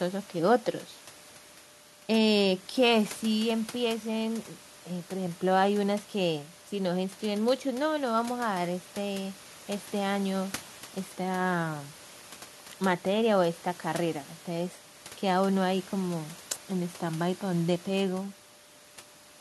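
No technical faults can be heard in the recording, only the room's own background noise sitting about 24 dB below the speech.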